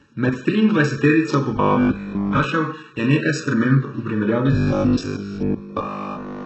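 Throughout the speech, a channel delay of around 0.7 ms between two copies summed to mono produces comb filtering. Components common to both copies cancel at evenly spaced frequencies, with the first notch near 700 Hz and further notches stacked above it. Because the delay falls between the dull-treble and doubling ranges, the result is a steady hollow, phasey colouration whose notches stay fixed in frequency while the speech moves through them.

Also present for the whole clip is heavy codec damage, likely from HE-AAC compression at a very low bitrate around 8 kbps. The spectrum stops at 8 kHz. The treble below that limit is rebuilt from copied lower bands rather than carried directly, so its harmonics do not line up with those beneath the crossover. Sibilants come out gritty, metallic or lispy instead of clean.

From 1.57 to 2.41 s there is robotic sound from repeated short buffers, likely caused by audio arriving too seldom and the gap being filled by replaying the last stretch. 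The imposed buzz sits at 50 Hz, which fits a 20 ms buffer. About 70 percent of this span is repeated material, so the speech takes on a rigid, metallic drone that follows the original only loosely.

The same robotic sound from repeated short buffers returns from 4.53 to 6.45 s, again with a 50 Hz buzz. This time essentially all of the span is repeated, likely because no fresh audio was getting through. The buzz runs for the full two seconds, until the end of the clip.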